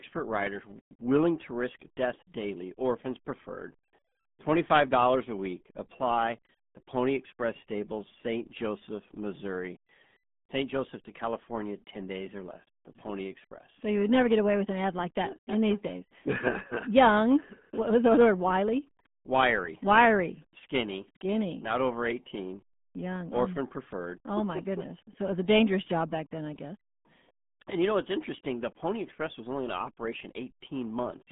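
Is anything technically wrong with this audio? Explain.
Yes. The RealAudio 14.4 codec degrades the speech throughout. Its low dial-up bitrate, which fits an 8 kbit/s stream, keeps only about 150 Hz to 3.5 kHz and nothing above 3.8 kHz. The speech sounds muffled, with heavy gargling artefacts.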